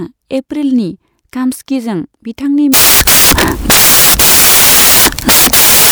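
Samples built from the wrong bytes take over at 2.74 s and last to the end of the clip. From that point the reader assembles each sample from mismatched bytes, whether shifted by one, swapped in order or misaligned, so the rapidly changing low-order bits land in the most significant position. The speech gives way to loud, harsh broadband noise, close to white on the louder sounds.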